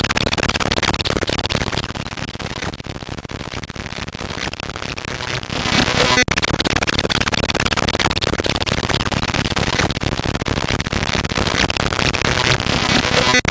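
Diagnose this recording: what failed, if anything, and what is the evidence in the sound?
Gain pumping runs throughout. The gain swings by around 15 dB, ducking under each loud sound. On the waveform the envelope looks flattened, with the noise floor rising between peaks. The likely cause is input gain set far too high, with a fast limiter clamping each event.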